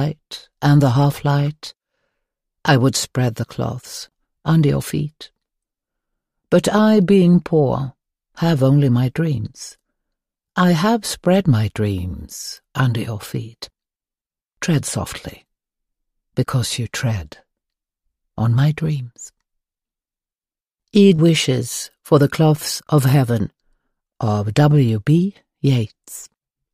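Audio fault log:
Nothing stood out on listening.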